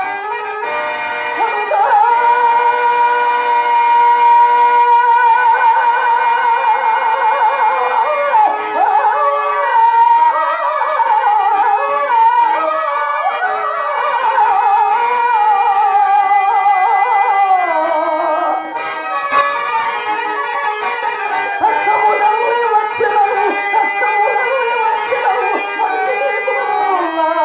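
At 19.32 s the audio and its background noise jump up together by about 6 dB in a single step, with no fade, holding the higher level until 19.41 s before dropping back just as abruptly. This is a sudden gain jump, likely caused by a digital gain setting or bit shift being applied from one sample to the next without a ramp. Throughout, the band stops at 4 kHz, which fits a 64 kbps G.711 mu-law call path.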